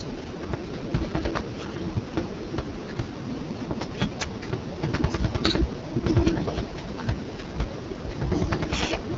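From start to finish the speech carries the sound of the AMR wideband (HD Voice) codec running at its lowest quality, with the roughness pointing to the 6.6 kbit/s mode. Nothing is present above 7.4 kHz. Below about 6.4 kHz the codec rebuilds the voice from a vocal tract model excited by sparse pulses, and at this rate that model is too coarse, so voiced sounds come out rough and raspy. The top band is filled with shaped noise.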